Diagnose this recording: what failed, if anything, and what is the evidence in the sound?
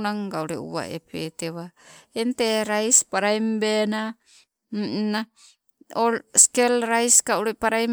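Nothing failed: no stage from capture to playback leaves any audible fault anywhere in the speech.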